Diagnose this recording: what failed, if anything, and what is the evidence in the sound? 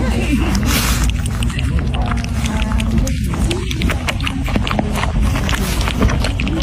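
The driver or buffer stage failed: periodic USB or driver dropouts, where something stalls the USB bus or audio driver on a fixed cycle and a sliver of audio is skipped each time. From 0.27 s to 6.51 s there are regular ticks every 0.249 s, about four per second, roughly thirty in all. Each loses only about half a millisecond, but because the samples are dropped rather than padded, the waveform jumps and clicks wherever sound is present.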